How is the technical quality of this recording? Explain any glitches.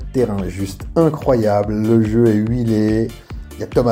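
Nothing stood out on listening; I didn't hear any glitches in this recording.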